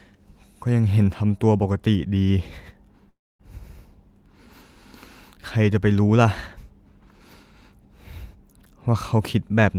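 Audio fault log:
3.09–3.41 s, long network dropout: the speech breaks off and the gap is filled for about 0.3 s, first by a smeared continuation of the last sound that decays, then by roughly a quarter-second of near silence before the talker resumes further on, with about 300 ms of the original never heard. This is likely a stall in the incoming stream, with the receiver concealing the hole by stretching what it last had until nothing remained to extend.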